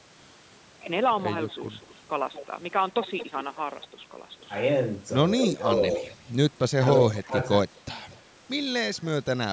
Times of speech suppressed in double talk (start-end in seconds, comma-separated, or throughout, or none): 5.52-6.06, 7.20-7.37